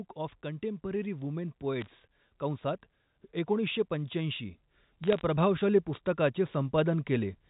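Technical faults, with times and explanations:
1.81–1.86 s and 5.04–5.21 s: bit errors on a digital phone line. Flipped bits, around half a percent then a fifth of a percent, each corrupt one G.711 sample, giving sharp ticks and crackle over intact speech. The waveform shows lone one-sample spikes, and the spectrogram shows thin vertical lines up to 4 kHz.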